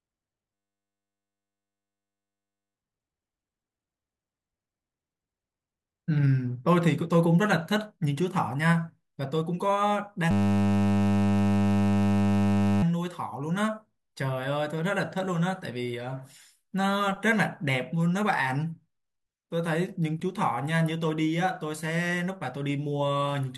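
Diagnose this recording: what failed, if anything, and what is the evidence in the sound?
System hang loop, at the driver or buffer stage. From 0.54 to 2.75 s and 10.31 to 12.83 s, the speech becomes a steady 100 Hz buzz. The stalled driver left the hardware replaying one 10 ms slice of its ring buffer, hundreds of times.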